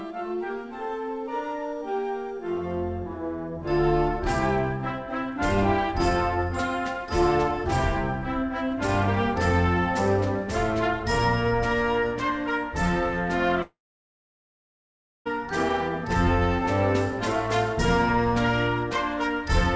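From 13.62 s to 15.27 s the audio cuts out: a short, fading buzz extends the last sound, then about 1.5 s of near-silence follows before the signal resumes with roughly 1.6 s missing. This is likely a long network dropout, the receiver concealing briefly before giving up.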